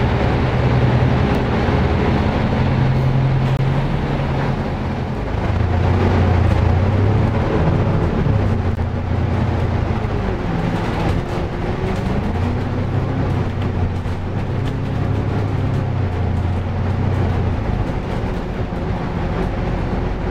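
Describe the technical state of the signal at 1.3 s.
At 1.35 s a block of digital silence of about 2.3 ms appears: the sound cuts out abruptly and back with no fade, heard as a single sharp tick.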